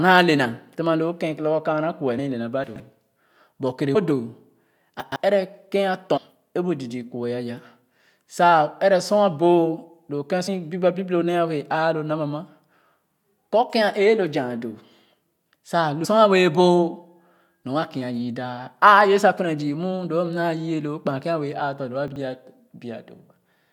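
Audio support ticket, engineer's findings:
Compressed frames skipped, speech jumps ahead at 2.18, 3.94, 6.16–6.18, 10.47 and 16.04 s. Jumps run from about 40 ms to roughly 0.3 s. Decoder or file dropping whole damaged or missing frames.

Chunks out of order at 2.64–2.80, 5.00–5.16 and 22.08–22.16 s. Garbled jumbled moment. A 40 ms chunk plays three chunks late in the first two and one chunk late at 22.08. This points to the buffering or write stage reordering chunks. Nothing goes missing, just the wrong order.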